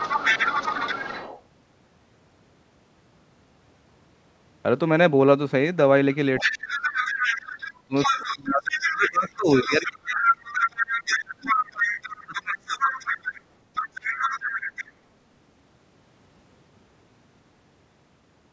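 From 0 to 1.42 s, 6.14 to 13.41 s and 13.74 to 14.86 s, the other side's voice leaks through. A second voice sits a little under the talker, fainter in the last stretch, likely leftover loudspeaker echo. At 6.41 to 7.04 s and 7.87 to 13.28 s, the talker's speech is suppressed in double talk. It dips by up to about 30 dB, likely because the echo canceller turned both sides down. Leakage adds a second voice, while this suppression takes the talker's own speech away.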